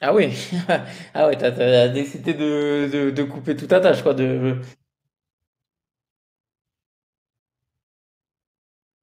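Between 1.15 and 4.67 s, automatic gain rising: the control, reading the input as too quiet, rises about 7 dB, swelling speech and background together.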